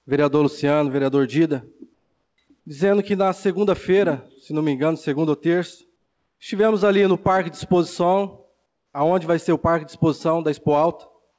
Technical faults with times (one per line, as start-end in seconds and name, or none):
1.94-2.38 comfort noise in place of the background
5.96-6.40 comfort noise in place of the background